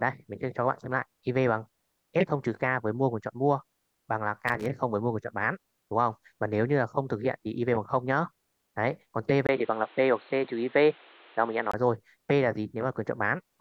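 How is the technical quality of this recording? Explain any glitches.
The recording has two glitches.

From 4.47 to 4.66 s, a loose connector crackle: a worn contact makes and breaks as it moves, chopping the signal into a short burst of crackling.

From 9.47 to 11.74 s, the input was likely switched to a poorer device. After a 20 ms silence, the sound turns dull, with nothing above 4.3 kHz and new background noise about 30 dB down. The level stays about the same, and the sound clears up again at 11.74 s.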